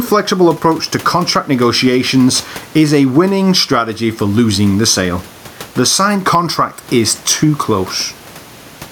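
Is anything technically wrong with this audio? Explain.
Yes. Throughout the speech, there is gain pumping: the background sits about 31 dB below the voice, and the gain swings by around 10 dB. The likely cause is input gain set too high, with a fast limiter repeatedly clamping it. Unlike a noise gate, which chops the background to silence, this leaves the speech squashed.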